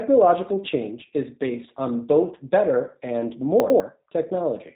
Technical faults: G.729 codec; chunks out of order

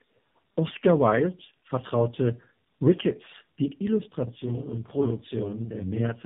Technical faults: tandem speech coding; channel delay (doubling)

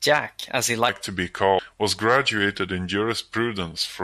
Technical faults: section at the wrong speed; damaged data in a compressed stream

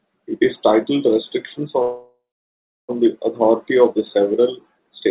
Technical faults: call audio freeze

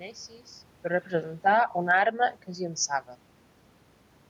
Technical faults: automatic gain falling

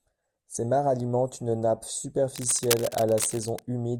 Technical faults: cable scratch noise

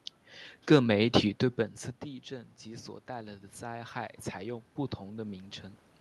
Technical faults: automatic gain rising

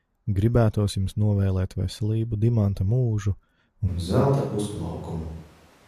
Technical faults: switch to a distant microphone

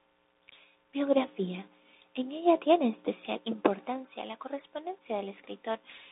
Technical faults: Bluetooth CVSD headset codec

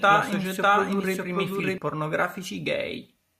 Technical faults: doubled audio track

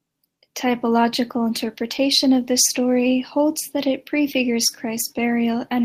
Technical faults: none

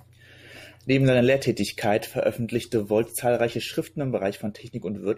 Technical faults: none

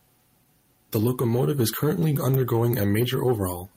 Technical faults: clock drift between sender and receiver; repeated timing corrections

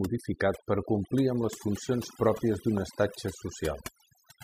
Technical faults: overdone noise removal; loud pop

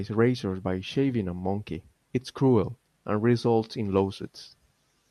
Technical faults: none

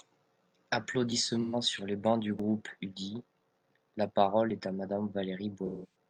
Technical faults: dropped buffer (overrun); AAC frame loss with concealment

